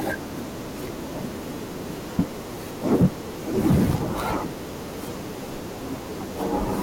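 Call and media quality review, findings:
Hard clipping, 2.92–3.06 s: harsh crackle as speech peaks overdrive about 7 dB, tops cut flat. Probably a gain stage or converter running out of headroom.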